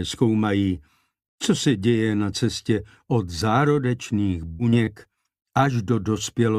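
Between 4.51 and 5.07 s the sound turns choppy and robotic, which is repeated packet loss. There are four quick holes, the longest about 78 ms, patched by stretching the previous sound, so roughly a quarter of that stretch is concealment rather than real audio.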